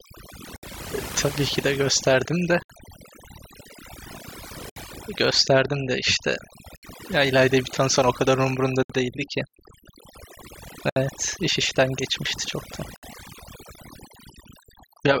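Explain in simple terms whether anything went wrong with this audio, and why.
The background has dropped and broken up into twinkling specks. This is overdone noise removal: a noise reducer set too strong cut away background noise along with the quieter parts of the voice.

Short holes of about 67 milliseconds cut into the sound at 0.56, 2.63, 4.70, 6.76, 8.83, 10.90 and 12.96 seconds. This is a gap at a join of encoded pieces: separately compressed chunks were stuck together, each keeping its padding silence.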